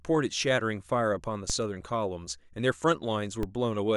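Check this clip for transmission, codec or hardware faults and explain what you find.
Two DC steps occur in the speech, one at 1.50 s and one at 3.43 s. At each point the waveform's zero line jumps by about -20 dBFS, as though an offset were suddenly switched into the signal path. A 20 Hz high-pass then lets the offset decay away. Each jump is heard as a brief low thump beneath the speech, which continues without interruption. That continuity separates it from a dropout or sample-glitch click.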